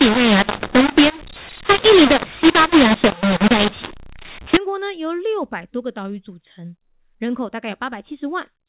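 From the start to about 4.57 s, just before "国呢由六", the speech shows a mu-law and A-law mix-up: telephone audio coded as A-law is being decoded as mu-law. Each 8-bit code is mapped to the wrong level, so some levels come out too large and others too small. The result is harsh, grainy distortion, with pauses filled by hiss. Ordinary G.711 coding, heard correctly after this point, leaves only a faint noise that follows the level, not noisy gaps.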